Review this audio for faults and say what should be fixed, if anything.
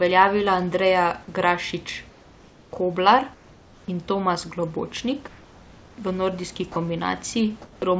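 Comfort noise in place of the background at 2.10–2.72, 3.34–3.88, 5.28–5.98 and 7.62–7.82 s: the room tone turns smooth and featureless, about 2 dB quieter except at 7.62 s. This is likely discontinuous transmission. On a spectrogram, the pauses show uniform grey noise.

Sound dropped by the voice detector at 6.72–6.76 s: about 30 ms of sound gives way to steady noise, likely because the detector misjudged it as background. A waveform shows a brief flat notch.

To prevent both, disable discontinuous transmission or lower the voice detector's threshold and add hangover time on the G.722 path, which cuts everything above 8 kHz.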